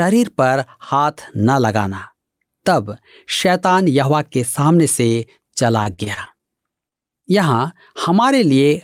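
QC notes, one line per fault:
5.83–6.43 s, repeated packet loss (robotic sound): six gaps in quick succession, the longest about 46 ms, with about 80 ms of audio missing. Each hole was patched by extending the preceding sound, about 141 ms in all. Roughly a quarter of this stretch is filled-in, so it turns choppy and robotic.
6.89–6.93 s, short concealed packet loss: a single hole of about 20 ms never arrived in time. The receiver continued the last sound for about 25 ms, then blended back into the real audio. This leaves a brief smear or wobble.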